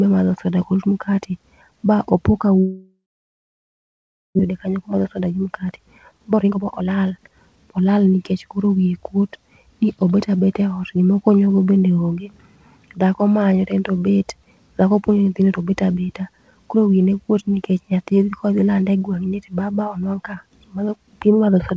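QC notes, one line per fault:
2.60–4.41 s, long network dropout: right after "ba opo ka" the last sound carries on as a fading buzz, then about 1.4 s of near silence. Audio returns with roughly a second of material missing. The likely cause is a long run of packets that never arrived, leaving the receiver to conceal the whole gap and resume about 0.7 s later than before.
4.51–8.33 s, jitter buffer speed-up: the speech leading into "koro wiye kuot ni" sounds hurried, running at 120% speed with its pitch unchanged. The buffer was holding the extra delay built up during the dropout, so the receiver repeatedly cut out short pieces of a pitch period or so, removing around 0.7 s in total.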